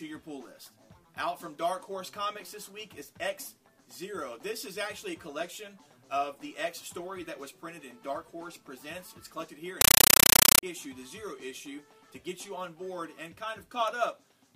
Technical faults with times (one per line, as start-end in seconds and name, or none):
9.81-10.63 compressed stream played as audio